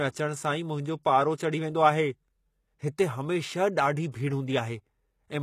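Throughout, the treble sounds gritty and metallic, with nothing above about 20.8 kHz. This is likely HE-AAC compression at a low bitrate near 20 kbps, rebuilding the highs from copied lower bands. From 4.11 to 4.14 s, a pre-echo appears. About 28 ms of hiss leads an attack, because codec noise spreads across the block and softens the onset.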